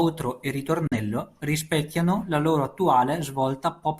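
At 0.87 s the speech drops abruptly into silence, with only a very fast fade of about 3 ms, and returns at 0.97 s. The content in that gap is missing rather than muffled. This is a digital broadcast dropout: the receiver lost good data and muted its output until valid frames arrived again. The roughly 43 ms of lost programme fits a single corrupted or missing frame.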